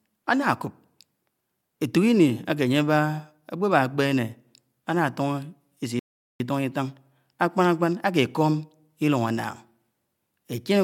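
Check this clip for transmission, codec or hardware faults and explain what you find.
There is one fault: a rebuffering stall from 5.99 s to 6.4 s. Playback ran out of buffered audio, fell silent, then resumed where it stopped, adding about 0.41 s. The waveform shows a flat gap and the spectrogram a blank column.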